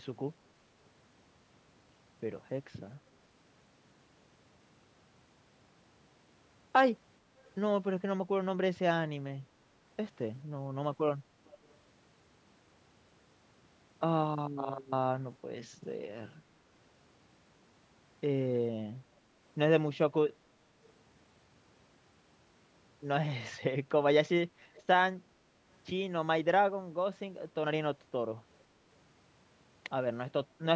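Faint, delayed copies of the speech appear at 7.42 to 7.47 s (barely audible), then louder at 11.45 to 11.77 s and 24.74 to 24.83 s, trailing by about 0.44 to 0.46 s. This echo leak likely comes from a loudspeaker whose echo canceller let some sound back.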